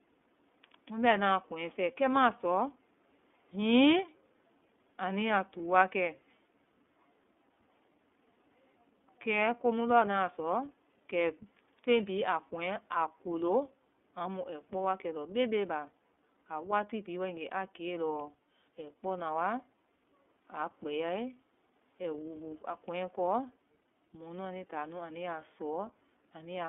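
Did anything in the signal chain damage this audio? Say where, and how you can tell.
Yes. Throughout the speech there's a narrow telephone band, roughly 250 Hz to 3.5 kHz, with nothing above, and a plainly audible rough, slightly synthetic grain on every syllable. That points to the codec stage, specifically the iLBC codec, which fits its 30 ms, 13.33 kbps mode. It models each frame's excitation independently of the previous one, so small discontinuities between frames add the buzzy texture.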